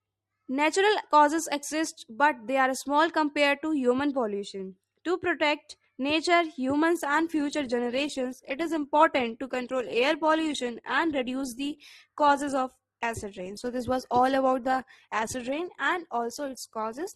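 A speech recording in which, at 6.96 s, an adaptive stream switches to a lower bitrate and stays there to the end. Codec artefacts abruptly rise, with no gap, consistent with an Opus stream dropping from about 64 to 16 kbit/s. A spectrogram shows the quality changing from that instant, while the waveform runs on unbroken.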